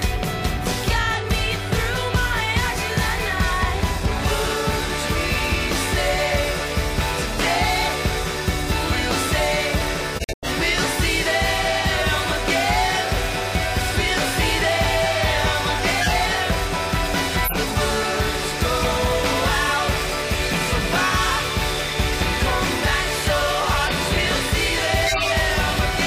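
At 10.15 s the sound drops abruptly into silence until 10.48 s, a hole of about a third of a second. This is a corrupt frame muted: the decoder rejected damaged compressed frames, which fits a run of about seven frames, and the player filled the gap with silence without shifting timing.

Short bursts of misplaced energy follow at 16.00 to 16.10 s, 17.45 to 17.56 s, 23.82 to 23.90 s and 25.06 to 25.31 s. They peak near about -5 dBFS for the first and last, about -10 dBFS at 17.45 s, and about -20 dBFS at 23.82 s. Each is a corrupt frame decoded: flipped bits were played anyway, spreading wrong gains across a couple of frames, or several in the longest.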